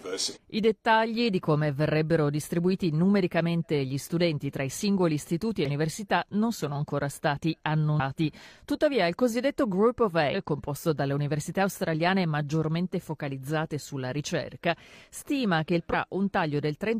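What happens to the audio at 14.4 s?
Nothing goes wrong at 14.4 s; the audio plays through that moment intact, with no dropout, click or distortion.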